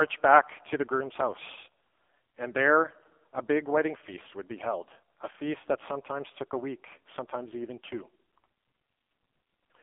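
From start to finish the speech runs through an AMR narrowband mobile codec. The line band sits at 200 Hz to 3.5 kHz, with nothing above 3.6 kHz. Codec damage is heavy: voiced sounds turn buzzy and synthetic, which fits AMR-NB at its 5.15 kbps mode. A plain low-pass filter would only dull the sound. Here the coarse vocal-tract model itself falsifies timbre, and that marks it as a low-bitrate speech codec.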